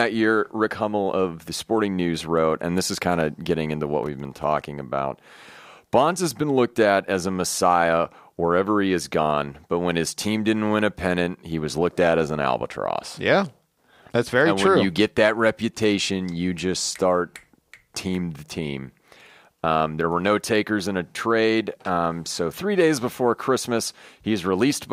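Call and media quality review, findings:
Processor overload crackle, 4.04–4.44 s, right after "of getting into what": gritty tearing from a dozen-plus tiny silent dropouts, CPU missing deadlines on sub-millisecond buffers.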